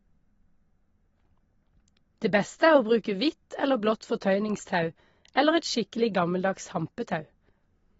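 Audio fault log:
Throughout: AAC compression. The speech has nothing above 7.6 kHz and plainly audible codec damage, a warbling, smeared texture on sustained sounds and sibilants, which fits likely AAC-LC coding at a low rate near 24 kbps. That texture sets it apart from a clean low-pass filter.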